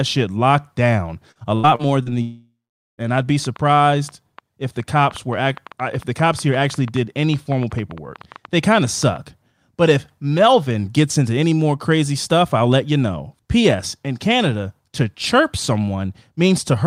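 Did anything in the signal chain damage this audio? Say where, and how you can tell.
Yes. Network stage: from 1.31 to 2.09 s, four short gaps (longest 83 ms) are patched by repeating sound, giving choppy robotic speech, unlike one long outage.

From 2.22 to 3.01 s a buzzy continuation fades into about 0.44 s of silence, then speech resumes with a piece missing, likely a long network dropout.

From 3.45 to 9.17 s, a train of clicks, about 40, ticks irregularly near 6 per second, as loud as the speech, likely interference or a faulty connection, removing nothing.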